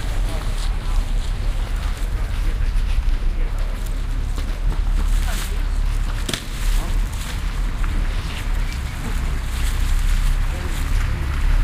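The clip is a recording of sounds, and nothing is technically wrong with it.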